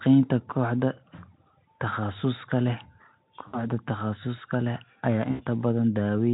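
Around 1.15 to 1.18 s, 3.48 to 3.70 s and 5.31 to 5.45 s there's VoIP packet loss concealed by the speech codec. The Speex-style decoder bridges gaps of about 20, 60 and 80 ms by stretching its last frame into a fading buzzy tone or coloured noise, and it sounds weak briefly afterward.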